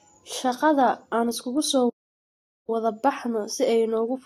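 At 1.89 s the speech cuts out abruptly and the output stays silent until 2.70 s, a gap of about 0.79 s, before the sound picks up again. This is a playback stall: the dropout is too long and too clean to be a brief glitch, and its likely cause is the player running short of buffered data or its audio thread being blocked, leaving nothing to output until it recovered.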